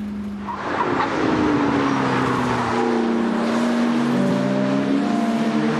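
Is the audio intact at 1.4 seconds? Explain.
Yes, the audio at 1.4 seconds is intact, with no dropout, click, distortion or other fault at that moment.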